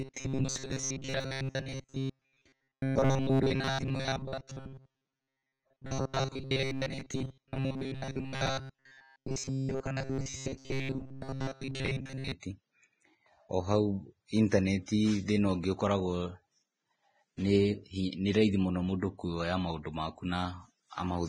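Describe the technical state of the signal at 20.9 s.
At 20.9 s the speech carries the same fault heard across the whole clip: low-bitrate audio saved at a high bitrate. The swirly, smeared texture of an aggressive lossy encode remains, which fits a very low-bitrate first pass, likely Vorbis, later rewritten as high-bitrate MP3 that cannot restore the removed detail. On a spectrogram the energy shows patchy, blocky gaps.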